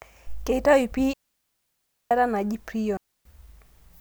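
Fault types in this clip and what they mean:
Digital wireless dropout: the radio link lost more data than the receiver could repair, so it muted the audio rather than pass on corrupted frames. The speech vanishes twice, from 1.13 to 2.11 s (nearly a second) and from 2.97 to 3.25 s (0.28 s), each a clean hole with no noise burst at either edge. On a waveform the signal drops to a flat line after a very short fade; a spectrogram shows a blank vertical band across all frequencies.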